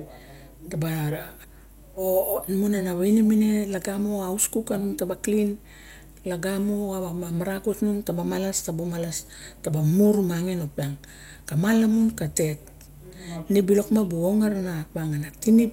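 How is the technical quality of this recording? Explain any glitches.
A steady low drone sits under the speech from start to finish, pitched at 50 Hz with some low harmonics above it. It stays constant through pauses and words alike, roughly 25 dB below the speech level. This is mains hum: power-line current leaking into the signal path, most often through a ground loop between connected equipment or from a transformer close to a cable or microphone.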